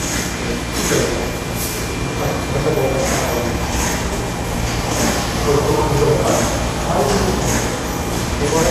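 A recording of sounds whose damage most likely comes from Vorbis compression at low quality, which fits a bitrate of about 36 kbps. Throughout, nothing is present above 14.2 kHz. Below that cut-off, the treble is so coarsely quantised that fine detail turns into noise of similar energy, giving a plainly audible hiss and grain, roughened tonal parts and softened, smeared attacks.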